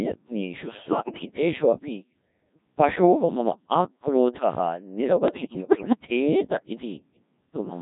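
Throughout, the speech sounds robotic and buzzy, rebuilt from sine waves rather than carried as a waveform. That is the Codec 2 vocoder at about 1.3 kbit/s, sending only pitch, voicing, energy and a coarse spectral envelope, so heavy codec damage colours every syllable.

From 0.68 to 1.25 s, and again from 5.28 to 5.97 s, the voice lurches in pitch, loudness and tone, breaking into warbles, bleeps and garbled robotic sounds. These are bit errors on digital voice radio. Flipped bits, around 7 percent in the first burst and around 10 percent in the second, corrupt the few parameters that define each short frame, so whole stretches of the synthesis go wrong at once.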